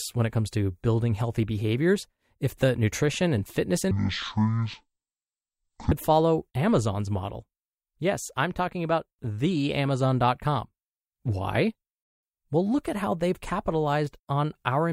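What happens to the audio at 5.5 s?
At 5.5 s the playback is in the middle of a stereo read as mono fault running from 3.91 to 5.92 s. The left and right samples of a stereo stream are being consumed one after another as if they were a single channel. Every pair of samples is stretched into two frames, so the speech drops to half speed and falls a full octave, 12 semitones, turning slow and deep, with a fainter mirrored copy showing up in the upper half of the spectrum.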